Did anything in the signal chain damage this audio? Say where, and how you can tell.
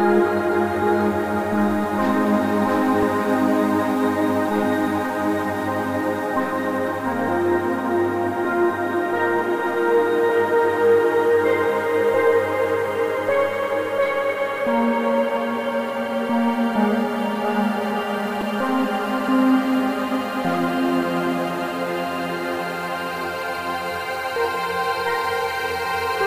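Yes, at the driver or buffer stage. Brief clicks at 3.03 s and 18.41 s are a repeated buffer: a 2.9 ms slice plays twice, then three times, with hard joins. That period fits a 128-sample buffer replayed when fresh audio arrived late.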